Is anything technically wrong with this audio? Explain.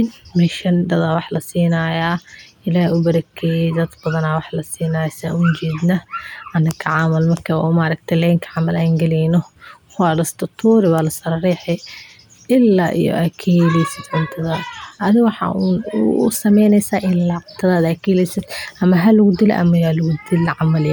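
No, nothing technically wrong can be heard here.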